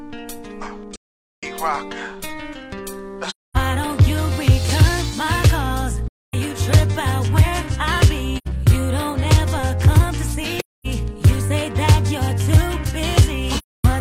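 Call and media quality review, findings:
AAC frame loss with muting at the decoder. Lost frames are zeroed and overlap windows fade in and out, leaving soft-edged silent gaps: 0.94–1.44, 3.29–3.57, 6.08–6.34, 8.37–8.48, 10.58–10.87, 13.58–13.85 s.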